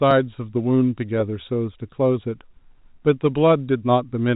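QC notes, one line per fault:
No faults are heard in this speech clip. It carries the narrow band of G.711 telephone coding, with nothing above 4 kHz and only a faint quantisation hiss that rises and falls with the level of the speech.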